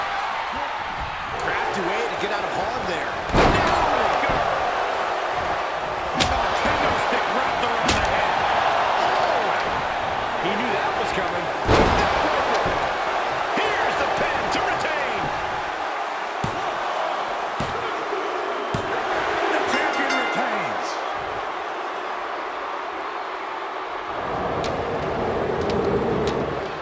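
No technical faults are audible.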